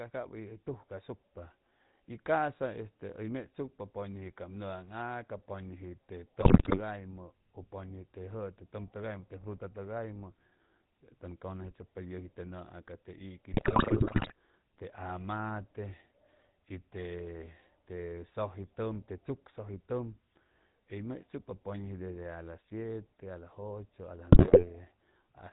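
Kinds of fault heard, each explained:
GSM full-rate codec: The speech has been squeezed through the original GSM coder, which keeps only a vocal-tract filter and a thinned, pulse-train excitation. Its output fits the 13 kbps full-rate standard. Nothing above 4 kHz survives, so the sound is dull and band-limited, and throughout the clip the voice carries a plainly audible buzzy, gravelly roughness where the coarse excitation stands in for the real glottal signal.
GSM bit errors: Corrupted bits on a poor radio link reached the decoder, scrambling the filter, pitch and gain values it rebuilds each frame from. Several percent of bits were flipped. The result is bursts of squawking, popping and gargling distortion from 6.40 to 6.81 s, 13.52 to 14.32 s, and 24.32 to 24.66 s. The middle burst is the longest.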